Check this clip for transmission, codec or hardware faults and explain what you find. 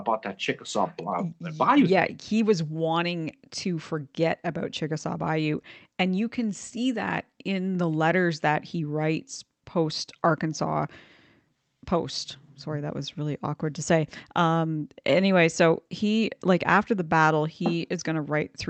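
No transmission, codec or hardware faults are audible here.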